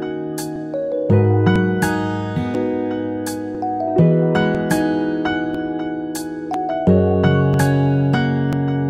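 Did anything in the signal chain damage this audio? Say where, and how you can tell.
Yes, at the driver or buffer stage: periodic USB or driver dropouts. From 0.56 s to 8.53 s, a tick recurs every 1.00 s, about ten in all, each skipping a couple of milliseconds of audio. The waveform shows small splice discontinuities, and the spectrogram shows thin, evenly spaced broadband lines.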